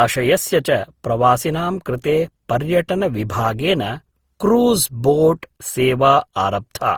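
Throughout the speech there is generation loss. The sound is swirly, hollow and smeared, with blurred attacks, likely from repeated Opus-style encoding around seven times at what sounds like 48 kbit/s. A spectrogram shows nothing above 20.5 kHz.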